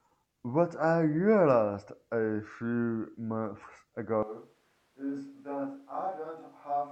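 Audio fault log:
4.23 to end, switch to a distant microphone: speech abruptly turns roomy and hollow, thinner in bass, about 10 dB quieter, with more room noise; likely the close microphone dropped out.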